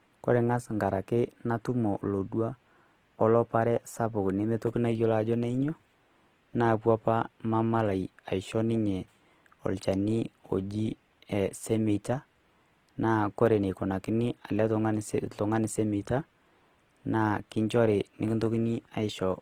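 Opus compression runs throughout the speech: a plainly audible rough, grainy texture, likely from a music-mode encode near 16 kbps filling starved bands with noise.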